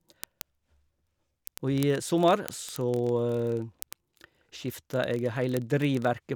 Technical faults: word clock ticks

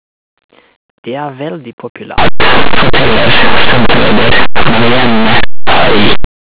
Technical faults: linear audio read as companded

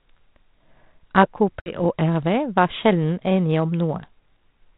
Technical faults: packet loss on an ADPCM call

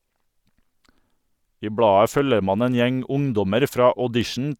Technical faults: bit error spike

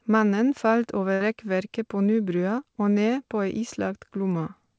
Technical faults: burst of packet loss

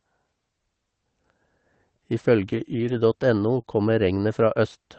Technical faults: lost packet rebuilt from error correction; short concealed packet loss

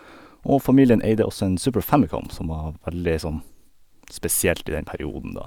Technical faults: none

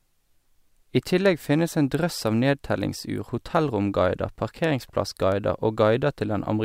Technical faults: word clock ticks

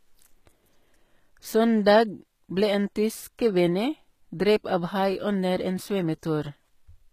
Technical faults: HE-AAC compression

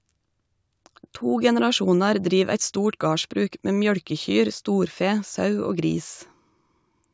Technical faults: none

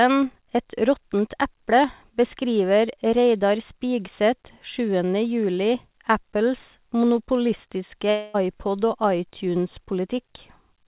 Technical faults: long network dropout

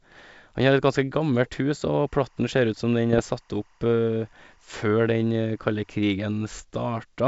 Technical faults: timecode bleed; bit errors on an ADPCM link

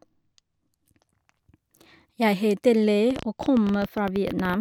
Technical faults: train of clicks

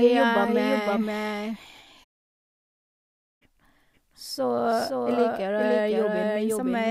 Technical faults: doubled audio track

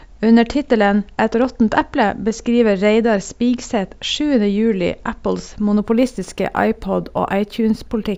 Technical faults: imaging from linear upsampling

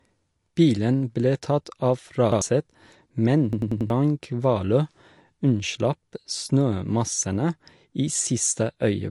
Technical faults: MP3 compression; repeated buffer

